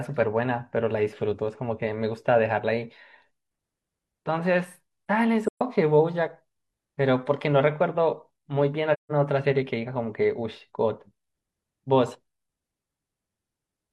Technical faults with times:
5.48-5.62 AAC frame loss with muting
8.93-9.12 AAC frame loss with muting

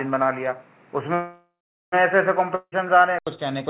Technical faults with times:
0.00-3.27 input switched to a poorer device
1.14-1.94 call audio freeze
2.55-2.74 long network dropout

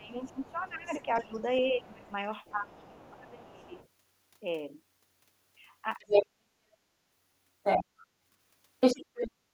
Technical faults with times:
0.00-3.77 speech suppressed in double talk
0.24-3.88 other side's voice leaking through
5.99-6.26 other side's voice leaking through
7.63-8.06 other side's voice leaking through
8.80-9.31 other side's voice leaking through
9.49-9.53 background gated by the echo canceller

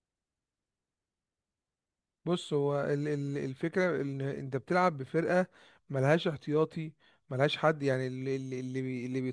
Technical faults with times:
none

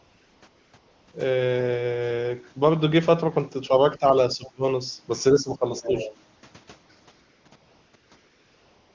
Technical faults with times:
0.00-1.13 AMR comfort noise
3.68-4.04 speech suppressed in double talk
4.35-4.64 speech suppressed in double talk
5.33-6.06 speech suppressed in double talk
5.76-6.14 other side's voice leaking through
6.35-8.94 AMR comfort noise

